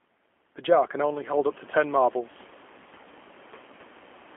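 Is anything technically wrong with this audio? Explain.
Yes, the speech runs through a G.729 codec the whole way. It's rebuilt from a vocal-tract filter, pitch predictor and a few pulses per frame, so it sounds rough and synthetic, squeezed into a 250 Hz to 3.4 kHz line band, which fits 8 kbit/s G.729A. The room noise that comes up about 13 dB around the one-second mark is just the recording space.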